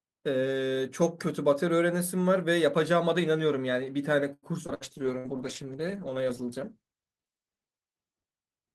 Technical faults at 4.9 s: repeated packet loss (robotic sound); call bitrate drop

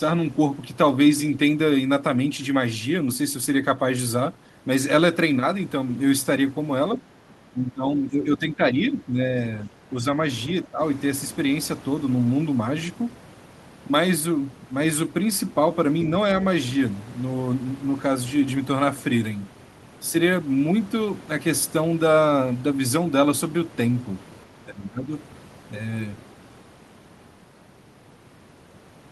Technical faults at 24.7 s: speech suppressed in double talk

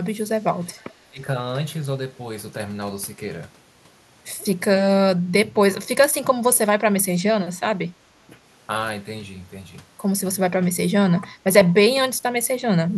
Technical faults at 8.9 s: none

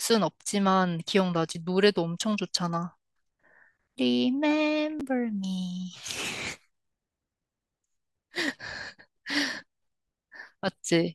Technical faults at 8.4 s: none

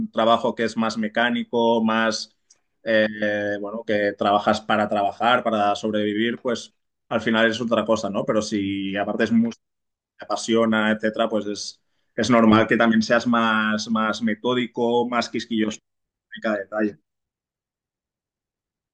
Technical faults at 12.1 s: none

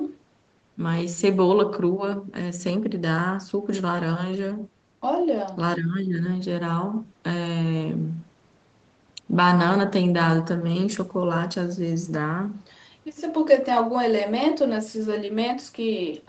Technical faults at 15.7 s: none

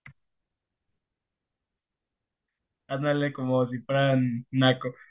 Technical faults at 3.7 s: none

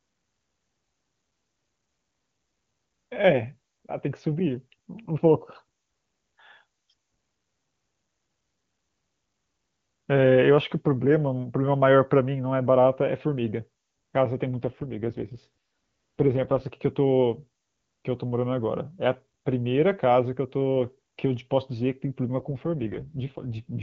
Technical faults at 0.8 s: none

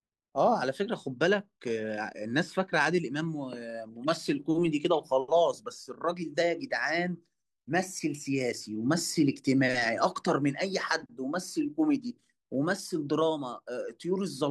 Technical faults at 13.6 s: none

